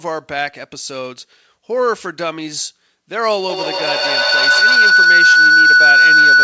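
At 3.49 s a feedback howl begins and runs to the end of the clip: a microphone is picking up a loudspeaker in the same room, and each trip around that loop adds level. The repeats, roughly every 150 ms, grow rather than fade and narrow to a tone near 1.5 kHz, until the howl sits about 11 dB above the speech. Throughout, nothing reaches above 8 kHz, which fits a wideband call codec such as G.722.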